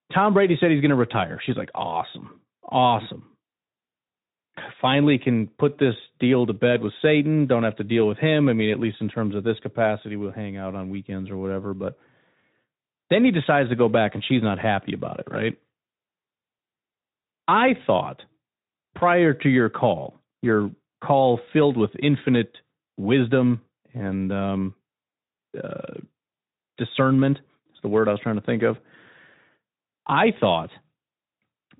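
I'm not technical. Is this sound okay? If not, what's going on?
Yes, this speech recording has no technical faults, and the Speex voice codec it passed through works as intended, with only the light roughness and the missing highest frequencies, above about 3.8 kHz, that are normal for that kind of voice-chat connection.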